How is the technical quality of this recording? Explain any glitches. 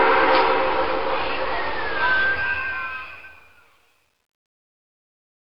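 The recording has one clear flaw, truncation distortion on the fade-out, from 2.20 s to the end at 5.49 s, worst after 3.07 s. Without dither, the fading level collapses into coarse steps, suggesting about 10-bit resolution, so the tail turns gritty rather than thinning smoothly, unlike a clean fade.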